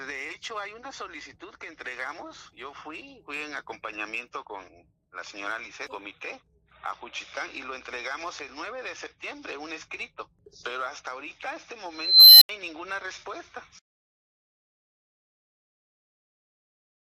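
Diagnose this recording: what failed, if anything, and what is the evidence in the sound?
An unstable filter in the processing stage fails at 11.88 s: a high squeal around 4 kHz swells over about 0.53 s until it clips, then the output drops to silence for 80 ms before sound resumes at 12.49 s. A recursive filter with bad coefficients feeds its output back with gain above one, so the tone grows until the arithmetic overflows and the filter resets. A spectrogram shows a brightening horizontal line near 4 kHz ending in a blank gap; the waveform shows an expanding envelope flattening as it clips, then a flat line.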